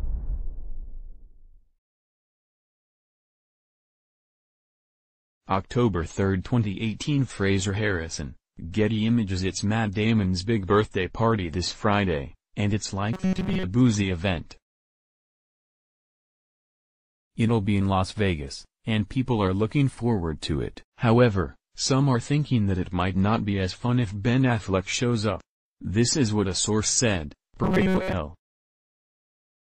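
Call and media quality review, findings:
Robotic sound from repeated short buffers, 13.13–13.64 s and 27.64–28.13 s: rigid metallic buzz at 188 Hz. Likely cause is buffer underrun in the playback path, with a roughly 5.3 ms block looped over most of each span while fresh audio is skipped.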